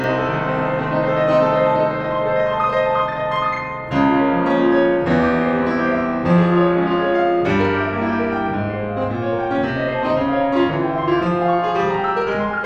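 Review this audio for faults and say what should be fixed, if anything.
One channel runs 40 ms late against the other, and when the two are summed to mono, throughout the music, the late copy lands as a separate equal-level repeat, so the channel delay (doubling) makes everything sound doubled with a tight slap echo. Align both channels' buffers before any mono fold-down.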